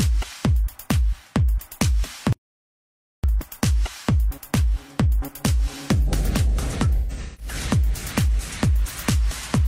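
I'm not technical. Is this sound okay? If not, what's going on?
No. Between 2.33 and 3.24 seconds there is an audio dropout to silence. The input signal was cut off, likely by a loose connection or accidental mute, so the recording holds dead silence. The sound stops abruptly, and nearly a second is simply missing.

From 6.97 to 7.54 seconds there is AAC frame loss with concealment. Small chunks of the compressed audio went missing, and the player guessed at them. About a third of a second was lost in pieces, the longest about 0.15 s, so that stretch sounds smeared and noisy.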